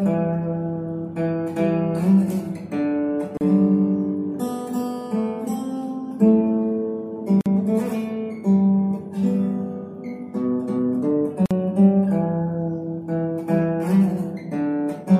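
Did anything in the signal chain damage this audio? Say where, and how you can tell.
Yes. The damage happened at the codec stage, where separately encoded pieces were joined with the encoder's start-up delay and final-frame padding left untrimmed. This shows as a gap at a join of encoded pieces, a short silence cut into continuous sound at 3.37 to 3.41 s (36 ms), 7.41 to 7.46 s (49 ms), and 11.46 to 11.51 s (49 ms). The gaps recur every 4 s, and each has smeared edges, with the sound resuming exactly where it stopped.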